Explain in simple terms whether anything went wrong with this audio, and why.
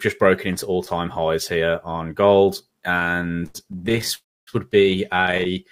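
Between 2.99 and 4.11 seconds the sound keeps catching and dragging. It halts 26 times, the longest pause about 78 ms, so roughly a third of that stretch is filler. A shorter burst of the same thing comes at 5.17 to 5.47 seconds, with 9 tiny hitches of 12 ms or less. This is repeated stalls (stutter). The audio data kept arriving late, so the receiver kept running dry and stretched the last sound to cover each wait. Nothing is lost, but the flow judders.

From 4.15 to 4.49 seconds the sound stops for about a third of a second, going almost completely quiet for most of that, then picks up exactly where it left off. This is a call audio freeze. The likely cause is that the incoming audio was held up on its way. The receiver briefly carried on the last sound, then fell silent until the delayed audio caught up. No audio is lost, but a gap is pushed into it.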